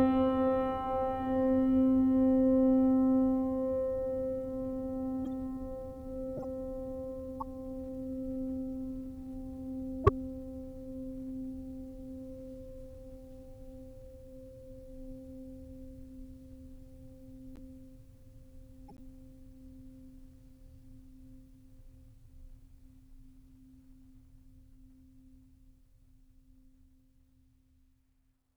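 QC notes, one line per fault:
5.25–5.27, 6.37–6.45, 7.40–7.42, 10.04–10.09, 17.56–17.59 and 18.88–19.00 s, corrupt frame decoded: short chirps and blips of noise cut across the music. The one at 10.04 s is by far the loudest and the one near 19 s the faintest. The decoder played damaged compressed frames, and misread gains or codes put stray energy at the wrong frequencies. Each burst lasts about one to a few frames' worth, and the longest, near 19 s, suggests a run of several bad frames.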